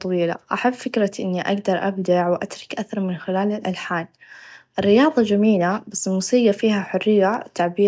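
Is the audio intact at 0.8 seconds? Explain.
Yes, at 0.8 seconds the speech plays through cleanly, with no dropout, click, distortion or other fault to be heard at that point.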